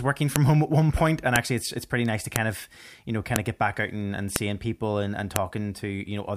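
Sharp, loud clicks snap through the speech at 0.36, 1.36, 2.36, 3.36, 4.36 and 5.36 seconds, exactly 1 second apart regardless of the speech. This is a file header played as audio: one-second WAV pieces were joined with their header bytes left in and decoded as samples.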